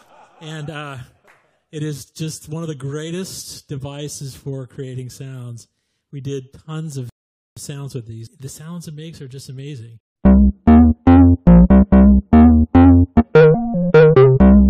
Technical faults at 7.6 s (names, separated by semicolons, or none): rebuffering stall